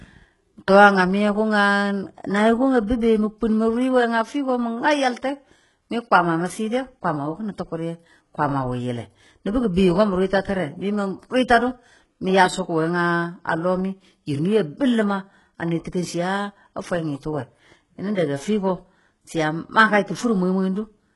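The speech was likely squeezed through HE-AAC compression at a very low bitrate, in the region of 12 kbps, for the whole clip. The codec kept only the lower spectrum and synthesised the treble by copying lower bands upward, so the top end is a rebuilt imitation, with nothing at all above 11.4 kHz. The damage is heavy throughout: s sounds come out gritty and lispy, and the upper register has a metallic sheen.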